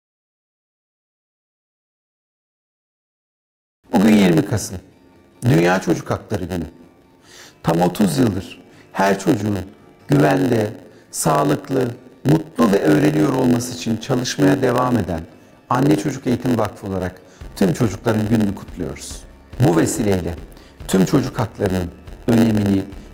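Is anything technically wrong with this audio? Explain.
Yes. Throughout, a steady buzz at about 92 Hz sits on the audio, which runs slightly slow at 0.919 times normal speed, timbre unchanged. This is a block size mismatch (padded): each short block is zero-filled to a longer read size, inserting a gap at the block rate.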